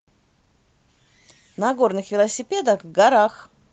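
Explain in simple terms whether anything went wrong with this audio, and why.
A jitter buffer speed-up runs from 1.59 s to 3.26 s, where the speech plays at about 113% of normal speed. The receiving end had stored up more audio than it wanted, so to catch up it repeatedly snipped out tiny slices, each lasting one or a few vocal cycles, about a fifth of a second in total. Because only whole cycles are dropped, the pitch stays the same, but this stretch sounds noticeably rushed.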